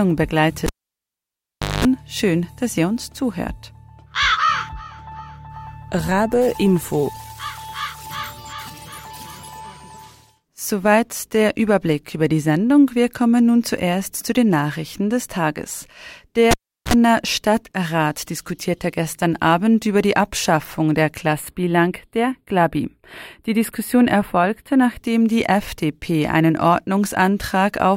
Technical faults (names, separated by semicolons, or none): cable pulled and plugged in; channel delay (comb filtering)